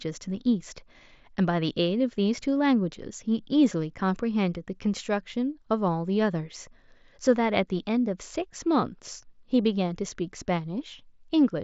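No technical faults detected.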